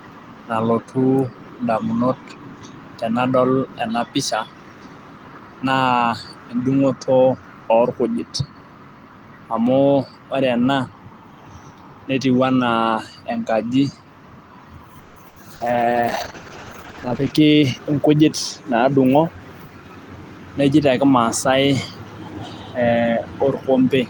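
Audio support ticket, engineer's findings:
Call audio freeze, 14.99 to 15.19 s: packets likely held in transit, jitter buffer ran dry. Last sound stretched into a fading buzz or hiss for about 170 ms, then speech resumes where it stopped. Nothing lost, but delay grows by 170 ms.

Burst of packet loss, 15.28 to 15.39 s: roughly 80 ms of packets lost or late. Decoder extends the preceding sound, attenuating into a held buzz or hiss. Speech picks up further on with that 80 ms gone.

Short concealed packet loss, 15.56 to 15.63 s: 40 ms missed the decoder. Gap filled by extrapolating the previous pitch or shaped noise, then crossfaded back. Heard as a brief smear or wobble, and a short consonant may drop out.

Call bitrate drop, 15.64 to 17.41 s: bandwidth estimate collapsed, Opus target cut from 32 to 10 kbps and held at the floor about 1.75 s. Coarser coding and reduced high band make speech rough, watery or muffled until recovery.

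Jitter buffer speed-up, 17.02 to 18.22 s: buffer over target after the earlier delay, receiver trimming pitch-period chunks repeatedly, about 150 ms in total. Speech plays at 113% speed with pitch unchanged, so it sounds hurried.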